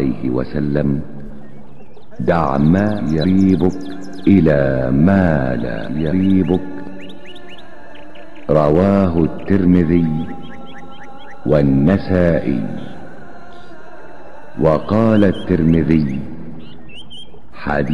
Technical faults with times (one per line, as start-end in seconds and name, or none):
1.26-1.30 corrupt frame concealed